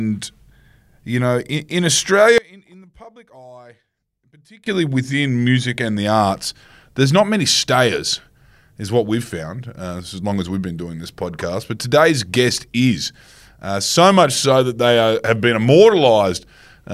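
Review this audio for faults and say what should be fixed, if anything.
From 2.38 to 4.66 s, between "you know in in" and "within music and the", the speech drops by about 26 dB and turns faint. This sounds like one channel inverted: likely one side has reversed polarity, so the centred speech cancels when the channels are summed to mono.

To prevent this, check polarity and phase correlation between the channels before any mono fold-down.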